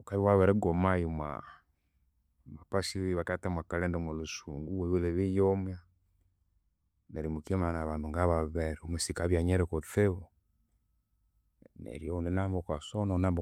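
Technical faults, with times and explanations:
No technical faults heard.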